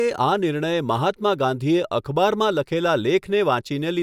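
Nothing stood out on listening to this speech recording.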